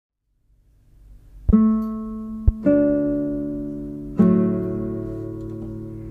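Two loud pops sit on top of the audio, one from 1.49 to 1.52 s and a stronger one from 2.48 to 2.51 s. Each is a single sharp transient about 30 ms long, peaking roughly 15 dB and 20 dB above the surrounding signal, while the sound continues underneath. The likely cause is a sudden voltage step or pulse entering the chain, from a plug, switch, static discharge or driver glitch, which the following circuitry shapes into a brief thump.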